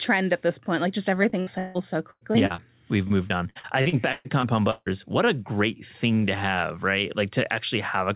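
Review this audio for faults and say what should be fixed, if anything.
Choppy speech with pieces missing runs from 1.3 to 2.6 s and again from 3.08 to 4.88 s. This is repeated packet loss: packets kept going missing, and each hole was patched by stretching the preceding sound. The longest hole was about 160 ms, and the patches cover about 34% and 28% of the two stretches. A steadier network path, with forward error correction or a deeper jitter buffer, would prevent it.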